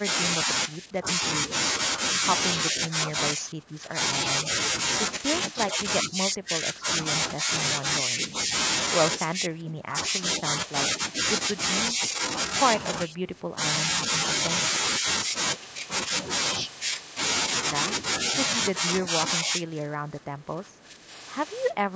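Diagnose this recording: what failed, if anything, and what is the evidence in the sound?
Call processing likely failed to handle double talk: the echo canceller couldn't separate this talker from loudspeaker echo and turned both down. The result is speech suppressed in double talk, dipping in pieces by about 10 to 20 dB at 0.06–1.06, 2.72–3.99, 5.69–8.25, 9.37–9.98, 11.97–13.58 and 18.8–21.95 s.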